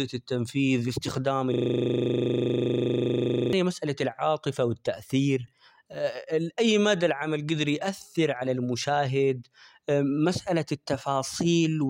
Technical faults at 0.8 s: none

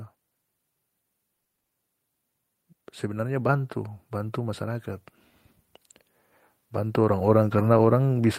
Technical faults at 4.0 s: automatic gain rising

